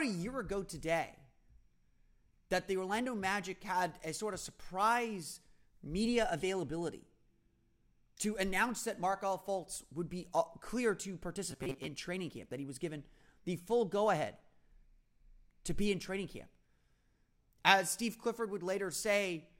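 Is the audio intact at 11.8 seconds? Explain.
No. Robotic sound from repeated short buffers covers 11.51 to 11.89 s. New audio likely arrived too seldom, so about half that span is a repeated slice of roughly 7.5 ms, imposing a rigid, metallic 134 Hz buzz on the speech.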